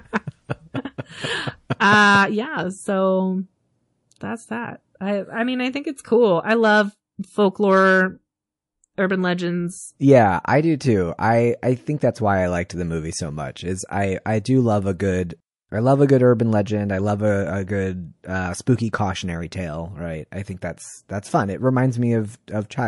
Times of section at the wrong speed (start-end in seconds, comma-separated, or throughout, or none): none